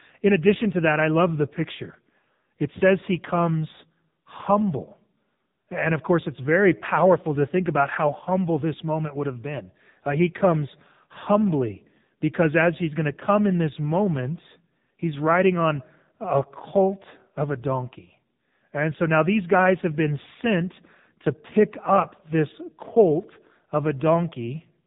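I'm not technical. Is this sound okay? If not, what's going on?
No. From start to finish, the speech has been squeezed through the AMR narrowband mobile codec, an old phone-call format. It discards everything above 4 kHz and rebuilds the voice from a rough model with very little data, so it sounds muffled, buzzy and synthetic.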